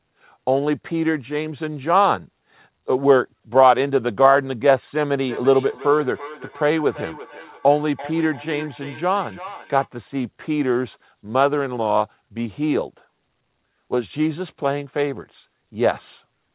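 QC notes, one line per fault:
5.23 to 9.90 s, feedback echo between two devices: the sound comes back roughly every third of a second, thinner and more ringing each pass, peaking about 17 dB below the speech. A second device replays the call near a microphone whose echo canceller cannot remove that playback.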